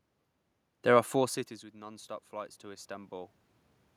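A speech recording in which, from 0.71 s to 3.39 s, the voice and the room noise behind it swell upward together over more than two seconds. That slow joint rise is automatic gain rising. Around 1 s the talker moves off the microphone, so the input falls by about 20 dB, and the gain control responds by gradually adding about 7 dB. Because it amplifies everything, the room's background noise is lifted along with the voice.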